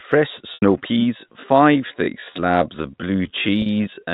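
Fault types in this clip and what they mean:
Packet loss with pitch repetition: 80 ms at 0.54 s and 40 ms at 3.62 s are filled by a repeated pitch period that fades out over about 50 ms.
Time-stretched section: from 1.14 s to the end, the pace drops to about 0.64 times speed. The pitch stays unchanged, which points to a likely stretch rather than slowed playback.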